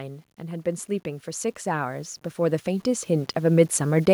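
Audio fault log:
throughout: low bit depth without dither. A grainy distortion rides on the speech and tracks it, roughening quiet syllables and decays, with the error sitting around 35 dB below the signal. The likely cause is coarse requantisation, consistent with 8-bit truncation with no dither.
0.37–4.08 s: automatic gain rising. Voice and background swell together, climbing about 13 dB over nearly four seconds. An automatic gain control judged the input too quiet and raised its gain gradually, so everything gets louder at once.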